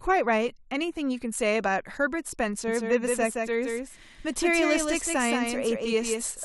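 From about 2.68 s to the end, there's a doubled audio track: a second, full-band copy of the speech trails the original by around 150 ms, a few dB quieter. It cuts in abruptly with no room colour, likely from a slower capture path also being mixed in.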